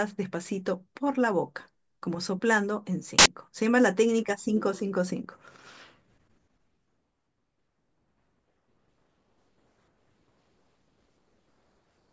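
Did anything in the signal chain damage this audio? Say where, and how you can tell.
Yes. A hard-edged burst of very loud white noise at 3.19–3.26 s is file tags played as audio: the player read compressed cover-picture data as samples.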